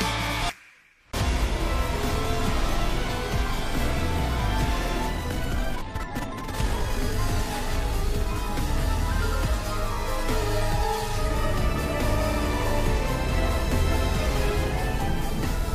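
A time-stretched section runs from 5.13 to 7.19 s: the sound suddenly plays twice as fast but keeps its pitch, turning rushed, likely from software dropping short pieces.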